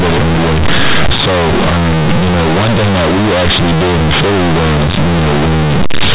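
From start to finish the speech is harsh and overloaded, a loud buzzing distortion that stays heavy even in the pauses, where strong noise fills what should be near silence. This is companded audio read as linear: the mu-law bytes of the G.711 telephone stream, itself band-limited below 4 kHz, are taken as plain 8-bit samples without expansion, so every sign change swings the output across roughly half its range and soft passages come out as loud as peaks.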